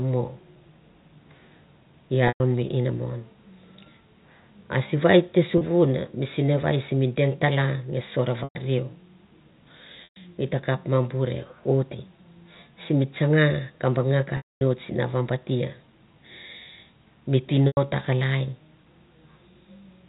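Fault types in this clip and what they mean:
Packet loss with pitch repetition: Six stretches of audio go missing, lasting 30 to 240 ms. The receiver fills each gap by looping the last pitch period. The 30 ms gap before "mi sinevai simi deng" is a brief buzzy hold. Longer gaps of 100 to 120 ms buzz, then fade to silence within about 50 ms. The 240 ms gap after "sim tsanga ka banga" fades into silence. Speech returns through a short cross-fade.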